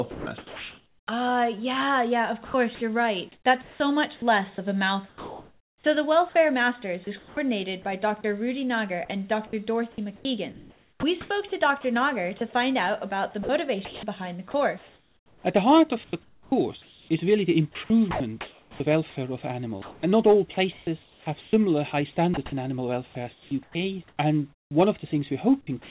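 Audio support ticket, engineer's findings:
Sound dropped by the voice detector, 0.11 to 0.26 s. Onset lost for 150 ms and replaced by flat hiss. Likely cause: the sender's VAD misread the start as background and stopped sending, so the receiver synthesised comfort noise. On the spectrogram the first 150 ms shows a smooth, evenly shaded band with no structure. In the waveform it is a low, uniform noise floor before the real envelope rises.

Comfort noise in place of the background, 0.11 to 1.07 s. The natural background is swapped for steady, featureless noise, about 840 ms of it filled in. Likely cause: discontinuous transmission. The sender goes quiet during the pause and the receiver generates noise roughly matched in level and spectral tilt. On the spectrogram it looks like a uniform wash without fine background detail. In the waveform it is a constant-amplitude floor, different in tone or level from the noise around it.

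Sound chopped by the voice detector, 2.45 s to the end, about 26 s. The VAD likely toggled repeatedly between sending and muting. About 6.3 s in total is replaced by synthetic fill, clipping quiet passages and edges. The result is choppy sound. On the spectrogram, textured segments alternate with smooth noise blocks that have hard vertical edges. In the waveform the envelope steps abruptly between signal and a flat floor. Throughout, nothing is present above 4 kHz, which fits a G.711 mu-law call path at 64 kbps.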